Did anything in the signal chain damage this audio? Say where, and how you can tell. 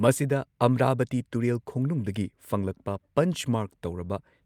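No, nothing in the signal chain has damaged this speech recording. At no point along the path is there anything to trace back to the wiring, conversion, processing, transmission, storage or playback stages.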